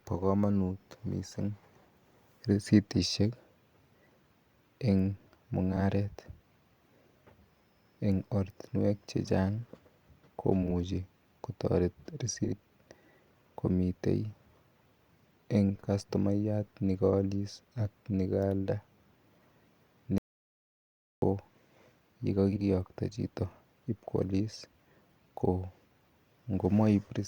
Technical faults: frames out of order; audio dropout to silence

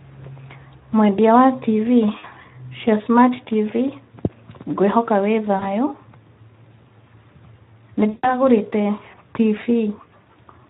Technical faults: Speex codec; VoIP packet loss concealed by the speech codec

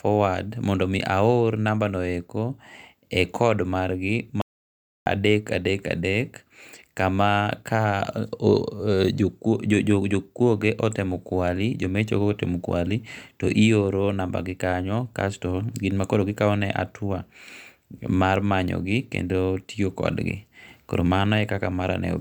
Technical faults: audio dropout to silence

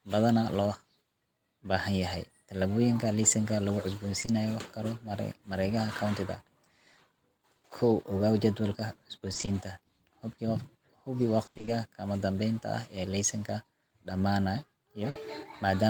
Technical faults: short concealed packet loss; repeated packet loss (robotic sound); burst of packet loss

